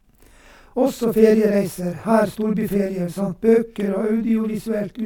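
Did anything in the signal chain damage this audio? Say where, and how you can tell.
Yes. Throughout the speech there is a channel delay (doubling): one channel arrives 40 ms after the other, and the mono sum plays both copies at equal level, so every syllable has a flammed, slapback quality. This is a driver or buffer stage fault. In the waveform, each onset appears twice, 40 ms apart. A spectrogram shows smeared attacks and dense comb notches spaced 25 Hz apart across the spectrum.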